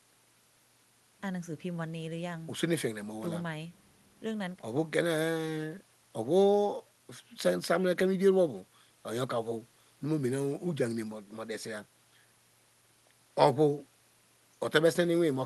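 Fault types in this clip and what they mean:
There are no fault types in this clip.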